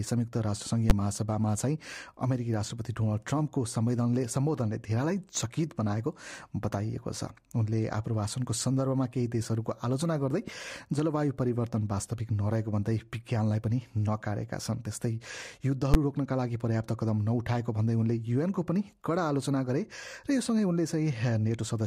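Two sharp bangs, at 0.90 s and 15.94 s, are caused by invalid numbers at full scale. At each point a calculation in the processing chain produced infinite or invalid values, which were clamped to the maximum positive or negative level, so the output sat pinned at one extreme value, far beyond the audio's peaks, for one block. Each event lasts about 10.7 ms, which fits a 512-sample buffer. Because the block is so short, each one is heard as a single loud bang.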